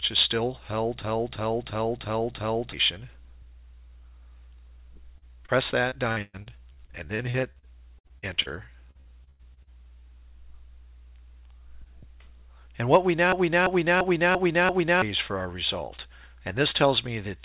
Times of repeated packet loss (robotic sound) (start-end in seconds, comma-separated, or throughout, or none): 5.18-8.49, 8.91-9.70